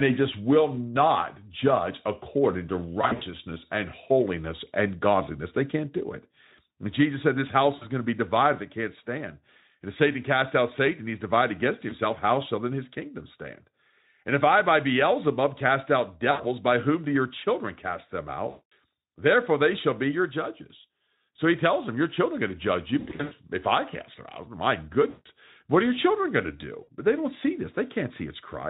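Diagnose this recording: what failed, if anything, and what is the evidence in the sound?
Speech drops into brief buzzy, smeared stretches that fade out, with the voice staying thin for a moment afterwards. This happens at 3.01–3.23 s (after "not judge according to"), 7.75–7.86, 11.89–11.94, 16.31–16.44, 18.49–18.72 (after "your children cast them"), 22.99–23.34, 25.09–25.28 (after "cast them out my") and 26.83–26.88 s. This is VoIP packet loss concealed by the speech codec, a network fault. The Speex decoder, running at about 15 kbps, bridges each gap by extending its last pitch and filter at falling gain.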